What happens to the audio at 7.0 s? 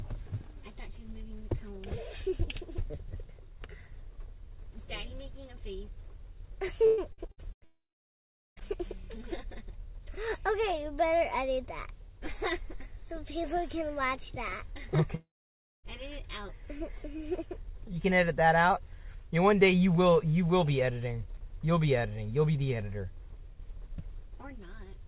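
Packets were lost or delayed over and over between 6.86 and 7.64 s, a stretch of repeated packet loss with six gaps, the longest 115 ms. Each hole is patched by extending the preceding sound, covering about 43% of the span, so the audio turns choppy and robotic, with pieces missing.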